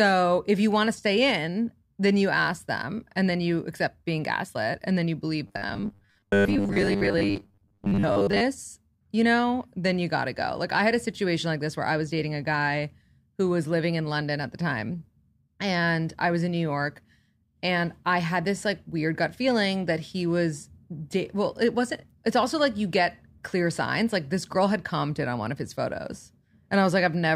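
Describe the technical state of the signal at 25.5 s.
At 25.5 s the speech signal is intact, with no audible fault at that moment.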